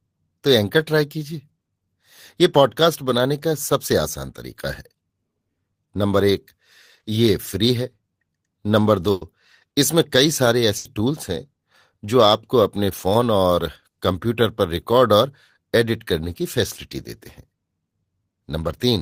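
At 9.11 to 9.23 s and again at 10.77 to 10.87 s, the speech has a burst of packet loss. About 100 ms, then 80 ms, never arrived, so the receiver extended the last sound as a decaying buzz or hiss, and the speech resumes with that stretch missing.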